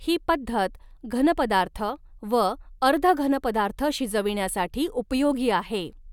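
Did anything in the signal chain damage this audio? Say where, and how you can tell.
No, nothing in the signal chain damaged this audio, and there is nothing to point to at any stage.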